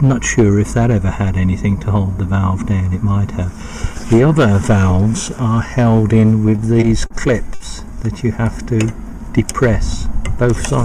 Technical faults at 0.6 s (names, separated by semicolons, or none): hard clipping